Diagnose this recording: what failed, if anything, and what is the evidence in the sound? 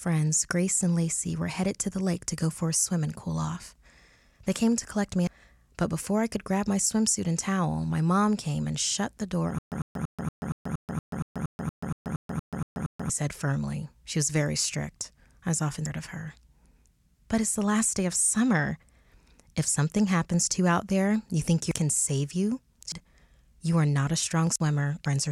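Compressed frames were skipped at the codec or storage stage. The speech jumps ahead at 5.27 s, between "came to collect me" and "but before I could", and at 15.86, 21.71, 22.92 and 25.06 s. Each jump loses about 0.3 or 0.7 s, with frames of 93 ms.

From 9.59 to 13.10 s, after "and shut the door" and before "said firmly", there is a stutter with silent gaps. A 100 ms fragment repeats 15 times, every 234 ms, with 134 ms of digital silence between. A stalled playback stream is the likely cause.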